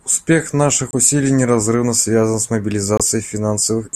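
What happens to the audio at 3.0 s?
At about 2.97 to 3.01 s the speech cuts out briefly, with a gap of silence, abrupt or faded over a few milliseconds at its edges, before it picks up again, as if it had kept playing underneath. That's a Bluetooth dropout, likely a packet arriving too late and getting discarded, which fits a single lost frame of around 23 ms.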